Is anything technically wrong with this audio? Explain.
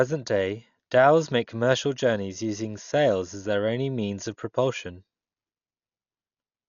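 Yes. Throughout the speech, the sound is dull and boxed-in, with nothing above about 7 kHz, and a rough, fluttering grit clings to the sustained tones of the speech. This heavy damage is likely Dolby Digital compression at a very low bitrate, on the order of 48 kbps. Short of bits, the encoder narrowed the band and left many frequency lines with no detail, so the decoder filled those gaps with dither noise, producing that unsteady roughness.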